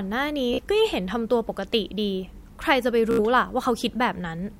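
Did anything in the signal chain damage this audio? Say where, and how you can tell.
Yes: Bluetooth stutter on the wireless link at 0.54–0.61 s and 3.11–3.20 s, where the receiver looped its last buffer over lost packets, giving a brief buzzing repeat.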